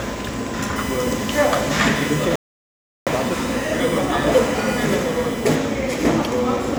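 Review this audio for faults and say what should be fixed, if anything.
A steady, fixed-pitch whine runs from 0.76 s to 5.55 s, sitting roughly 15 dB below the sound. It is USB whine: current drawn in the bus's 1 ms frames leaks in through power or ground, giving a 1 kHz tone whose 2 kHz harmonic is strongest. To prevent it, power the interface separately or add a USB ground-loop isolator, and keep audio cabling away from the USB line.

From 2.36 s to 3.07 s the sound cuts out mid-flow for about 0.71 s, then carries on. This playback stall most likely happened because the player ran short of data or its audio thread was blocked. To prevent it, give the player a larger buffer and run its audio thread at higher priority.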